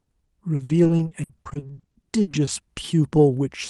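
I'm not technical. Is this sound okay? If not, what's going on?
No. From 0.55 to 2.49 s the speech turns choppy and robotic: repeated packet loss. About twenty short gaps, each patched by stretching the last sound.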